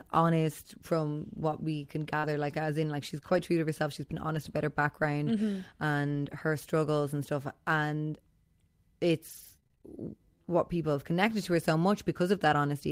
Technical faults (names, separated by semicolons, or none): short concealed packet loss; lost packet rebuilt from error correction; repeated packet loss (robotic sound); jitter buffer slow-down